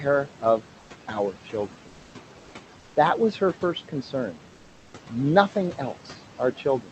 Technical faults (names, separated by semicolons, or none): noise suppressor artifacts; comfort noise in place of the background